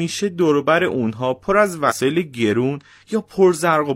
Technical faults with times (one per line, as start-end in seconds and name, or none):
1.86-1.93 damaged data in a compressed stream